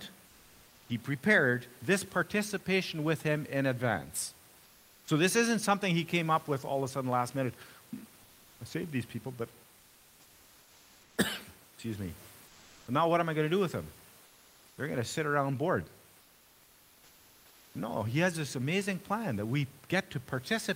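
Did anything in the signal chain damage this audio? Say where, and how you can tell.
Yes. At the codec stage, discontinuous transmission, likely Opus DTX, stops sending in pauses, and comfort noise in place of the background fills 0.27–0.89, 4.63–5.07, 12.47–12.87, 14.25–14.77 and 16.21–17.73 s. The real room noise turns flat and featureless, up to about 4 dB quieter.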